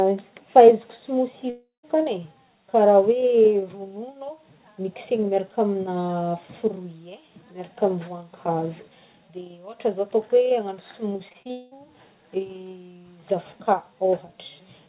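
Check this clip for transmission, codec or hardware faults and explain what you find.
Two transmission faults are audible in this speech, over a band-limited call path with nothing above 4 kHz, which fits G.711 A-law at 64 kbps.

From 1.5 to 1.85 s there is a long network dropout, likely the cause of this break. About a third of a second of audio never arrives. The receiver stretches the last sound into a fading buzz, then about 160 ms of silence follows before speech resumes further on. Unlike choppy loss, it is one continuous hole.

From 11.13 to 11.73 s there is repeated packet loss (robotic sound). The stream breaks six times, with the longest gap 200 ms, and half of the span is patched by continuing the previous sound. The rapid succession of patches gives a choppy texture rather than a single silence.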